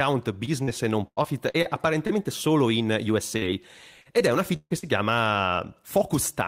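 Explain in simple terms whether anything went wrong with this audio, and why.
Yes, several pieces of this speech recording went missing in transit and were patched over by the receiver.

Short concealed packet loss occurs at 0.45–0.49 s, 0.63–0.69 s, 2.07–2.11 s and 3.37–3.43 s. Each time, roughly 20 to 40 milliseconds of audio arrived too late to be played. The receiver covered each hole by stretching the sound just before it, then blended back into the real audio. You hear a brief smear or wobble, and a short consonant may disappear.

Repeated packet loss, which gives a robotic sound, affects two longer stretches. From 1.07 to 1.67 s there are four holes, the longest 96 milliseconds, and about 30 percent of that stretch is patched. From 4.01 to 4.85 s there are four more, the longest 143 milliseconds, with about 28 percent patched. Because the holes come close together, one patch follows soon after another. 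The speech turns choppy, with pieces missing.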